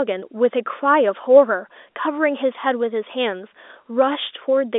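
A speech recording with nothing technically wrong in it.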